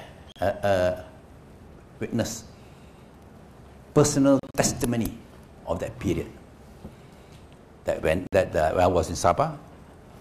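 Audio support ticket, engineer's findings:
Silent gaps at 0.32 s, 4.39–4.55 s (choppy, 93 ms lost in bits) and 8.27 s; sound jumps ahead after each. Likely Bluetooth dropout, packets arriving too late and dropped.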